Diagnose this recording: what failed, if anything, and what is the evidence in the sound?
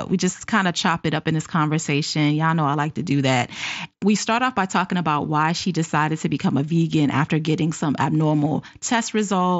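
Nothing has failed here: the speech comes through a Bluetooth mSBC headset link doing its normal job, topping out around 8 kHz with a touch of light grain on the louder moments, so there's nothing to chase down.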